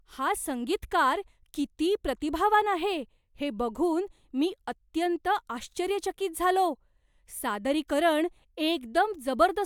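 No technical faults occur at any point in the recording, so there is nothing to place in time order.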